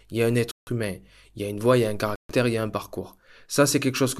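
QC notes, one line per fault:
0.51–0.69 s and 2.16–2.31 s, Bluetooth stall: the wireless link likely stalled when resent packets arrived too late and the headphone buffer emptied. The speech drops to silence for 157 ms after "il y a un" before "humain il y a", then for 138 ms between "il y a un" and "il y a un".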